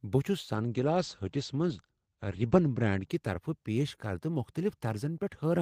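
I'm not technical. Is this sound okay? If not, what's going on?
No. From 0.56 to 3.73 s there's a call bitrate drop: the connection squeezed the speech, so it turns muffled and rough, then recovers without cutting out.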